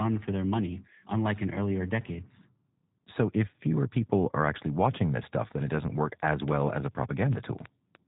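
Speech throughout, band-limited with nothing above about 3.8 kHz and a rough, slightly synthetic texture typical of G.729 codec coding, which fits an 8 kbit/s G.729A stream rebuilding each 10 ms frame from a vocal tract filter, pitch predictor and a few pulses. From 6.48 s to 7.96 s, right after "it doesn't work as", a train of clicks adds about ten similar pops at an irregular pace of about 5.4 per second, peaking about 15 dB above the signal, likely from interference from nearby equipment or a faulty connection or power supply.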